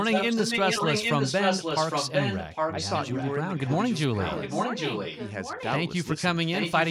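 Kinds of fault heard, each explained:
Echo leak: A delayed copy of the speech comes back about 0.81 s late. It is likely that a far-end loudspeaker feeds a microphone whose echo canceller leaves some of it in. Until 3.35 s the echo matches the speech in loudness. Later stretches are quieter.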